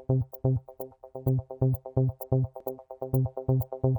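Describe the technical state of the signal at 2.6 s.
At 2.60 s the signal has an overlap between stream segments. Two segments were stamped as sharing about 40 ms (2.60 to 2.64 s), so the player discarded that stretch as if it were duplicated, even though it was not. The sound skips forward and the waveform joins abruptly. Unlike a dropout, there is no silent or concealed gap: material is simply missing, and the join lands directly on later sound.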